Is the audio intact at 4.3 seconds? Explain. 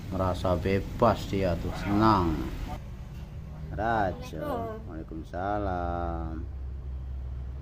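Yes, at 4.3 seconds the audio plays through cleanly, with no dropout, click, distortion or other fault at that moment.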